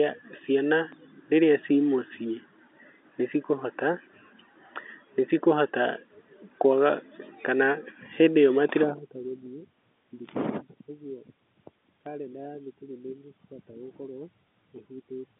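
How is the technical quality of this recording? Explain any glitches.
The recording carries two glitches, both low thumps, heard through the narrow telephone band of G.711 coding that leaves nothing above about 3.8 kHz. Each is a DC step, at 0.92 s and again at 12.06 s. The waveform's zero line abruptly shifts, then eases back as a 20 Hz high-pass drains the offset. That produces a brief thump, unlike a dropout, because the speech continues unbroken through it.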